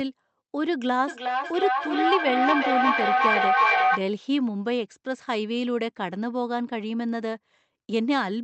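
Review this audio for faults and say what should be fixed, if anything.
There's feedback echo between two devices from 1.07 to 4.09 s: the speech comes back roughly every 0.4 s, thinner and ringier each pass, and peaks about 4 dB above the talker, so the repeats build up instead of fading. To prevent it, mute one device's speaker or mic when both share a room.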